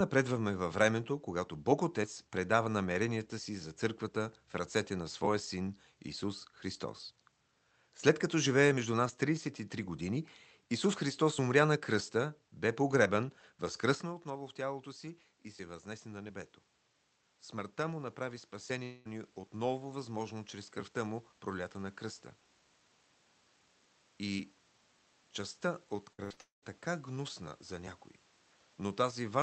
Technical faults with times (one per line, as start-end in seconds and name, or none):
14.04-29.08 automatic gain rising
18.83-19.07 long network dropout
26.13-26.32 burst of packet loss
26.32-26.39 short concealed packet loss
26.41-26.64 long network dropout